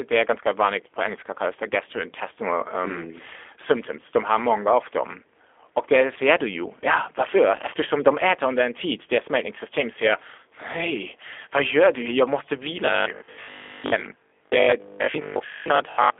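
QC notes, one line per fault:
throughout: G.729 codec. The speech is squeezed into a telephone band of 300 Hz to 3.5 kHz with nothing above 3.7 kHz, and has a rough, synthetic edge, which fits an 8 kbit/s G.729A coder rebuilding it from a vocal tract model. Unlike simple band-limiting, the harshness is in the voice's texture, not just dullness.
12.86 to 16.18 s: robotic sound from repeated short buffers. The speech turns into a rigid, metallic buzz at 50 Hz, still loosely tracking the words, likely from audio arriving late so 20 ms chunks are replayed while most of the real sound is skipped. Unlike the codec roughness, the buzz rate stays fixed regardless of intonation.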